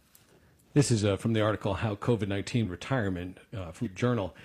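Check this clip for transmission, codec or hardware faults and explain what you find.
Damaged data in a compressed stream appears twice in this speech, at 2.60 to 2.66 s and at 3.81 to 3.88 s. Both are short, about 60 ms each. At each point some of the coded bytes reaching the decoder were corrupted. The decoder could not parse those frames correctly, lost its frame sync, and had to scan forward for the next valid header. That gap is heard as a brief chirp, squawk, click or short hole that breaks into the speech.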